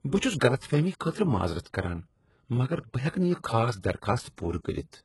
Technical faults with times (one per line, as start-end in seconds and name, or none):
0.00-5.05 HE-AAC compression